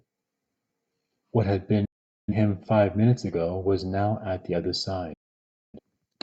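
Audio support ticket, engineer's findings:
Digital broadcast dropout, twice in the speech. First at 1.85–2.33 s: sound fades out over about 8 ms, then a silent hole of about 0.43 s, probably the receiver muting on bad frames. The gap fits roughly ten lost frames. Second at 5.13–5.79 s: same quick fade, about 0.6 s missing, consistent with around fourteen frames. Audio picks up later each time, so whatever was sent during the holes is gone.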